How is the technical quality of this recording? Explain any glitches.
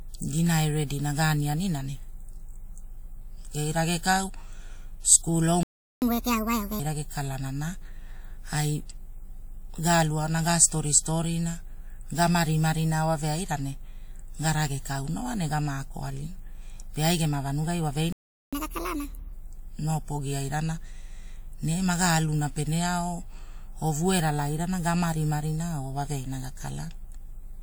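The recording has two playback glitches, each a dropout followed by a sped-up stretch.

The first is a playback stall at 5.63 s: the speech cuts to silence for about 0.39 s and picks up again at 6.02 s. A second stall hits at 18.12 s and lasts about 0.40 s, ending at 18.53 s. This is likely the player running dry on buffered data or its audio thread getting held up, so nothing reaches the output until it recovers.

Right after each gap comes catch-up at higher speed, from 6.02 to 6.80 s and from 18.53 to 19.33 s. The player works off its backlog by resampling to 1.5 times normal speed. Because resampling changes speed and pitch together, the speech comes out rushed and chipmunky, up roughly seven semitones. After just under a second it drops back to normal pace and pitch.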